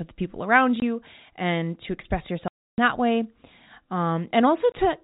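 Packet loss filled with silence chops the speech at 0.80–0.82 s after "the people around", 2.48–2.78 s after "and to express", and 4.72–4.74 s. The 20 and 300 ms holes fit 20 ms packets. Each appears as a flat, blank column with hard edges.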